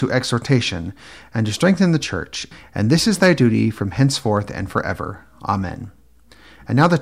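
Right after "the church and", from 2.93 to 3.46 s, the speech runs into hard clipping. The level overshoots what the chain can pass by about 4 dB, so the peaks get sliced flat and throw off high harmonics, giving a gritty fuzz. Brief crackly ticks follow at 4.37 s and 4.78 s, where it only just tips over, by about 0 to 1 dB. A final harsh burst at 6.81 to 6.87 s is pushed hardest, around 5 dB.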